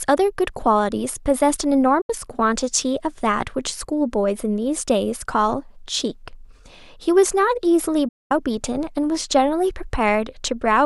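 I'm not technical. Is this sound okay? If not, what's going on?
No. This speech has a digital broadcast dropout: the receiver briefly lost good data and muted itself. The sound fades to silence within a few thousandths of a second, at 2.01 s for about 0.09 s and at 8.08 s for about 0.23 s, and whatever was said then is gone.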